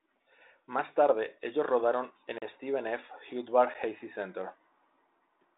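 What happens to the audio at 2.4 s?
At 2.38 s the speech drops out for about 38 ms, until 2.42 s, heard as a brief hole as the signal snaps to zero and back with no fade. This is a block of digital silence: a run of samples was replaced by zeros, most likely because the output buffer wasn't filled in time. The telephone-band G.726 coloration stays as it is on either side.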